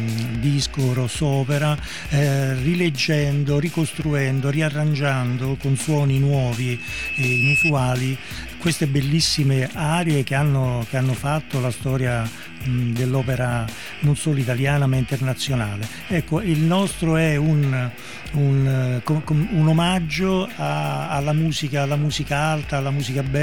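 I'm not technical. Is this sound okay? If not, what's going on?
No. From 6.51 to 7.73 s there is a loudspeaker feedback squeal: a single high whistle at 2.6 kHz that swells over roughly a second until it is louder than the rest of the sound. A microphone was picking up the loudspeaker it was feeding, so that one pitch kept going round the loop and growing. It stops at 7.73 s, which suggests the loop was broken there.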